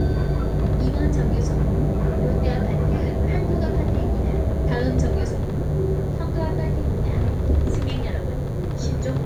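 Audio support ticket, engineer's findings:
DECT cordless phone buzz, present throughout the recording. Steady, thin 100 Hz buzz with a dense harmonic series, sitting roughly 30 dB under the sounds. Probable source: a DECT handset or base station close to the audio chain. Its radio bursts every 10 ms are rectified by an input stage, turning RF pulses into an audible 100 Hz tone.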